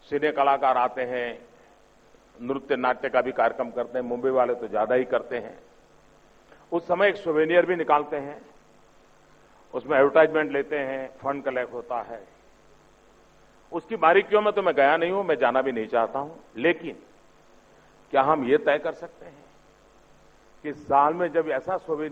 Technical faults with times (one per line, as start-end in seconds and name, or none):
none